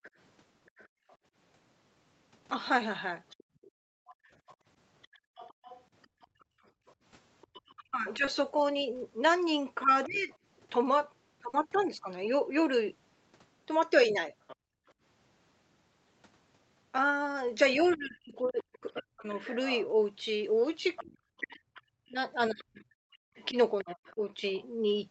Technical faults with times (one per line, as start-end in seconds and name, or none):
0.03-10.38 other side's voice leaking through
0.88-6.86 background gated by the echo canceller
7.76-10.30 speech suppressed in double talk
8.25-8.29 short concealed packet loss
11.49-11.55 short concealed packet loss
14.47-24.66 other side's voice leaking through
14.56-14.86 background gated by the echo canceller
17.95-24.53 speech suppressed in double talk